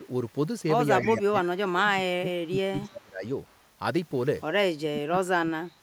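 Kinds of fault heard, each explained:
Echo leak: The far side's echo canceller likely let part of its loudspeaker pickup through, so a copy of the speech returns about 289 ms late. It arrives as four short scraps at 1.02–1.13, 2.46–2.55, 2.86–3.03 and 3.47–3.60 s. The first sits about 15 dB below the direct speech and the third about 20 dB below. The second and fourth are faint, about 40 dB down.
Speech suppressed in double talk: With both ends talking together, the echo canceller likely could not tell the local talker from loudspeaker echo and turned everything down. The speech sags from 1.05 to 3.25 s, with about two seconds affected in pieces and the deepest dip around 25 dB. It happens again from 4.71 s to the end at 5.82 s, about a second in all, dropping as far as roughly 35 dB.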